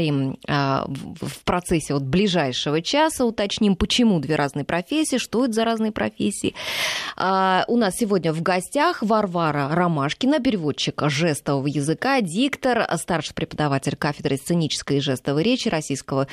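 No technical faults are audible.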